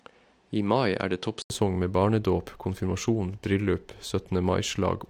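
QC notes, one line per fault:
0.0–1.5 s, input switched to a poorer device: nothing above 10.5 kHz, faint added noise floor, 80 ms gap before "med barnedåp konfirmasjon bryllup"; likely another microphone.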